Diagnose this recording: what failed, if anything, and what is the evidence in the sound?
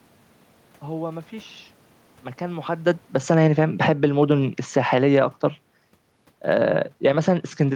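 Automatic gain falling at 2.51–4.08 s (about 10 dB), 4.61–5.11 s (about 7 dB) and 6.34 s onward. Call-processing gain control lowers gain gradually, so speech and room noise sink together.

Automatic gain rising from 5.05 to 5.52 s, about 5 dB. The same call-processing stage raises its gain, and speech and background noise swell together.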